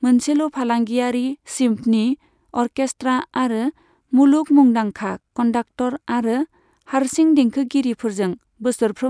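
Listening through this speech recording, nothing stood out as a technical fault.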